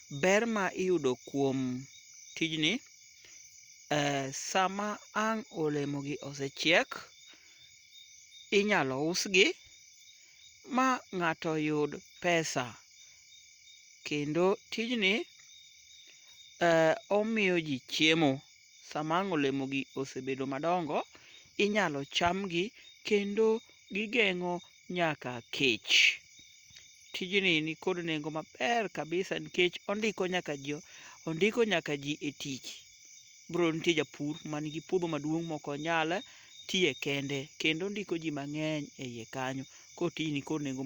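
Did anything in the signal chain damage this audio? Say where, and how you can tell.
No, nothing in this speech recording stood out on listening as damage from any stage of the signal chain.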